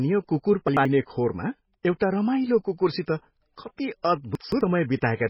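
Speech with heavy MP3 compression throughout, likely from a very low bitrate near 16 kbps. Nothing is heard above 5.6 kHz, and the remaining sound has a watery, swirling quality with smeared consonants. Unlike a plain low-pass filter, the damage shifts from moment to moment as weak frequency components drop in and out. Chunks out of order appear at 0.68–0.85 s, where an 85 ms block is one chunk late, and at 4.35–4.61 s, where it is two chunks late. Each produces a jumbled stretch. Unlike a dropout, no audio is missing; the same audio simply plays in the wrong sequence.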